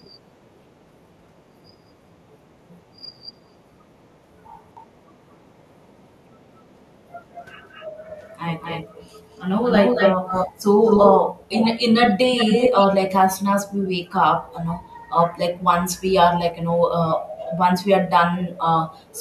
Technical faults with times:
4.75-10.52 echo leak
10.85-11.68 echo leak
12.01-12.87 echo leak
19.11-19.18 echo leak

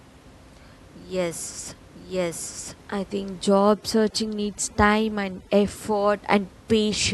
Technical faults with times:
3.44-5.90 overdone noise removal

